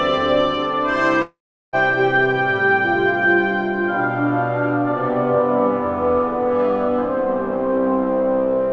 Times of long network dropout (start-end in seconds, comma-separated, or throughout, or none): 1.22-1.76